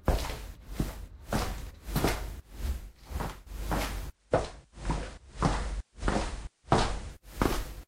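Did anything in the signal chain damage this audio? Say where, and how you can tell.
Yes. From 4.07 to 7.23 s a faint hiss rises and the level shifts by about 1 dB, each change easing in over 147 ms. This is digital radio blending to analogue FM at the receiver, which crossfades to the narrower, noisier analogue signal when digital reception drops.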